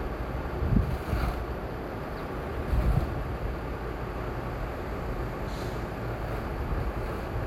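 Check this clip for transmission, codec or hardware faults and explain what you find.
Nothing in the audio points to a transmission, codec or hardware problem.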